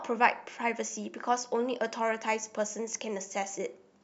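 No technical faults can be heard anywhere here.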